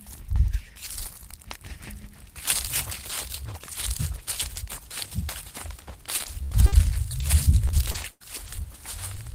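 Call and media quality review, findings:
Repeated packet loss (robotic sound), 6.17–8.48 s: seven dropouts, longest 81 ms, about 300 ms missing. Jitter buffer/PLC extrapolates the last frame into each hole. Recurring holes give a choppy texture, not one isolated smear.

Lost packet rebuilt from error correction, 9.14–9.16 s: 20 ms frame with no gap but briefly rougher and noisier. Opus in-band FEC decoded a low-bitrate copy from the next packet. A degraded frame plays, with no stretched or repeated audio as PLC gives.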